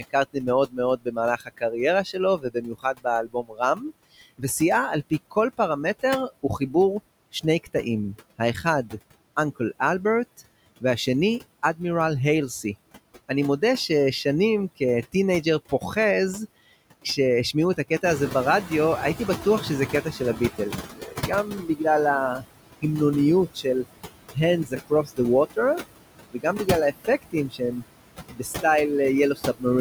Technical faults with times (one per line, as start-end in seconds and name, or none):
0.00-29.80 DC offset
0.00-29.80 noise suppressor artifacts
0.00-15.96 speech cut by the noise suppressor
17.04-29.65 speech cut by the noise suppressor
18.03-20.61 noise suppressor catching up